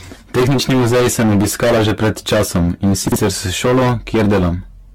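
From the start, the speech is driven into hard clipping. The level sits about 19 dB past what the stage can pass. Nearly a third of the samples hit the ceiling and are cut flat. Those flat tops add harmonics high up the spectrum. The result is a harsh, constant fuzz on every loud syllable, not an occasional crackle. It runs the full length of the clip.

Also throughout, the sound is swirly, smeared and hollow. Consonant attacks blur and the texture shimmers unnaturally. Nothing is present above 17 kHz. The likely cause is generation loss: repeated decoding and re-encoding, around ten passes, with a lossy codec. The character fits an AAC-LC chain at 96 kbit/s. Each pass quantises on a shifted frame grid, so the noise and spectral holes stack up. That makes it worse than one encode at that rate would sound.

From 3.08 to 3.16 s there is a short garbled moment. Here the chunks are out of order. 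A 40 ms chunk plays one chunk late, after the one that should follow it. No audio is missing, but the sequence is swapped. Three hard joins result. Together they make a brief jumbled stutter in the flow of speech.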